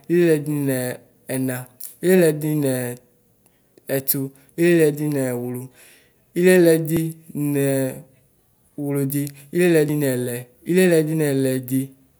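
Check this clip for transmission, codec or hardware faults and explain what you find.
Three short skips at 5.94, 6.97 and 9.89 s, each with the speech jumping forward by around 50 ms. That's likely a dropped buffer (overrun): the hardware overwrote samples before the software collected them, so the gap is cut out and both sides butt straight together.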